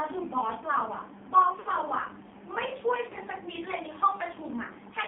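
The whole clip runs through the AMR narrowband mobile codec. Everything sits in a phone band of roughly 200 Hz to 3.5 kHz, and the heavy buzzy, synthetic edge on the speech points to a low-rate mode around 6 kbps, with too few pulses to model the voice cleanly.

At 1.60 to 1.69 s you get lost AMR speech frames. The decoder fills a 60 ms gap, which fits three dropped 20 ms frames, by repeating its last pitch and vocal tract settings at falling gain, so the sound smears and sags. There's a shorter 40 ms dropout of the same kind at 3.10 to 3.17 s, heard as a brief warbly dip before the speech picks back up.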